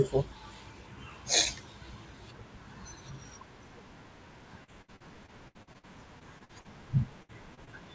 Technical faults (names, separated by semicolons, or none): repeated packet loss (robotic sound); burst of packet loss; short concealed packet loss